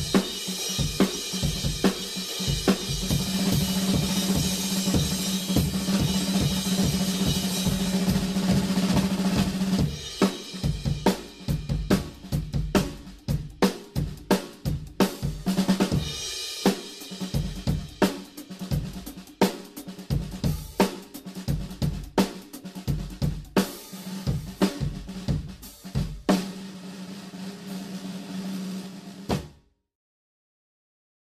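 Repeated frames at 28.63 to 28.77 s: a short block of compressed audio, about 70 ms long, which fits a run of roughly three frames, was stored or transmitted more than once. The decoder therefore plays that same slice two extra times in a row, producing a brief stutter where the sound loops back on itself before moving on. The duplicated material stretches the audio by about 139 ms.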